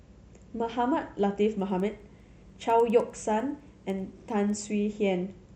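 From 1.6 to 4.7 s, steady ticks at 10 per second ride the speech. The resampler restarted on every 100 ms block, leaving an error at each edge.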